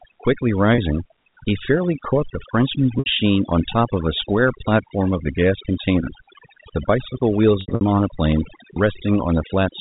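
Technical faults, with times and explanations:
Throughout, overdone noise removal: an overly aggressive suppressor drives bands near its noise estimate down, leaving near-silent background with twinkling specks.
0.75 s, 2.99 s and 7.61–7.81 s, packet loss with pitch repetition: the receiver repeats the last pitch period across 30 ms and 70 ms gaps, then 150 ms lost in bursts over 200 ms, heard as buzzy held fragments fading toward silence.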